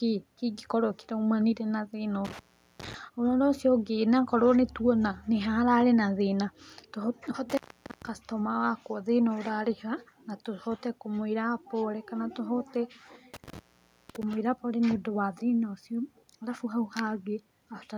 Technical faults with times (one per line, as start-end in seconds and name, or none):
2.25-2.94 intermittent contact
7.50-8.09 intermittent contact
13.34-14.33 intermittent contact